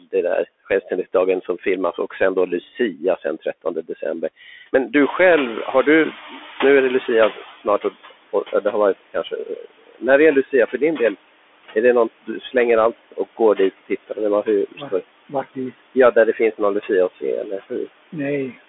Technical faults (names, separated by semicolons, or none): noise suppressor artifacts; Bluetooth CVSD headset codec; speech cut by the noise suppressor; noise suppressor catching up